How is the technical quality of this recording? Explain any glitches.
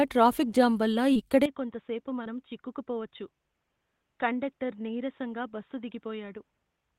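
The recording has two kinds of fault: two brief dropouts that were patched over, and a lasting change in tone partway through.

At 1.13 to 1.17 s and again at 2.23 to 2.27 s there is short concealed packet loss. Each time, about 20 ms of the audio arrived too late for the decoder. The receiver filled the gap by extending the sound just before it, then blended back into the real signal. Each patch is brief. It may be heard as a quick smear or wobble, and a short consonant there can blur.

From 1.46 s to the end, the sound turns duller and quieter. Nothing above 3.8 kHz remains. The level drops by roughly 10 dB, and a new low background noise appears, about 50 dB under the sound. There is no silence at the change. This is likely an input switched to a poorer device, such as another microphone or a headset's call mode, with its narrower band and different tone.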